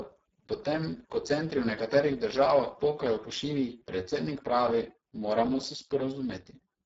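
From the first moment to the end, the speech carries the marks of overdone noise removal. The reduction was set far too hard, so any frequency band sitting near its noise estimate is pulled down or shut off entirely, taking the quieter parts of the speech along with it. The background drops away and breaks up into twinkling specks, with the softer components of the speech hollowed out.

Layered over that, across the whole clip, is heavy Speex codec damage. This CELP speech coder has very few bits left to describe the excitation signal, and the hoarse, noisy quality points to a very low setting in the region of 6 kbps. Content stops entirely above 7.7 kHz, and the upper band that remains sounds like shaped noise filling in for real detail.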